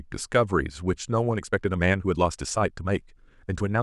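A speech recording whose final part, from 1.32 s to the end, was likely time-stretched by software, compressed to about 1.47 times speed, so the delivery turns suddenly rushed while pitch stays unchanged.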